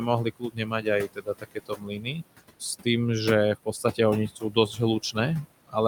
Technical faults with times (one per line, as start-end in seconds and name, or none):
0.00-5.88 noise suppressor artifacts
0.24-2.23 speech cut by the noise suppressor
3.66-3.99 speech cut by the noise suppressor
4.28-4.79 speech cut by the noise suppressor